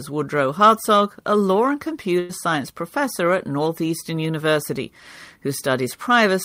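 At 2.19 s, right after "a law and", a burst of packet loss takes out about 100 ms of the speech. The receiver covers the hole for roughly 96 ms by stretching the last sound and letting it fade, so a brief held, decaying smear is heard instead of silence. Speech resumes at 2.32 s on "science professor at" with the lost stretch simply gone. The faded filler, rather than a clean dropout to silence, is what marks this as concealed loss.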